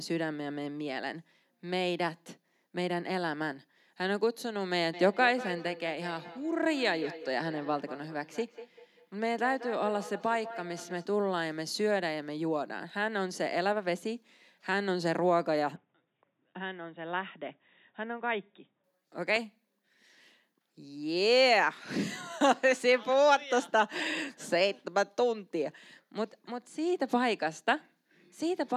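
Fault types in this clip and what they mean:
Feedback echo between two devices: A second device in the room replays the call, and its sound re-enters the microphone. The echo canceller cannot remove it. From 4.93 to 11.09 s, the speech repeats about every fifth of a second. The repeats peak about 14 dB below the direct speech.
Input switched to a poorer device: From 15.76 to 18.84 s, the sound turns dull. The band narrows. The level drops by roughly 5 dB, and a faint new noise floor sits far below the speech. No gap marks the change. A mid-recording input switch is the likely cause.
Loud pop: At 19.36 s, a single sharp pop sits on top of the speech, which carries on underneath. It peaks roughly 5 dB above the signal. The likely cause is a sudden voltage step, such as a plug, switch or static discharge, shaped by the circuitry downstream.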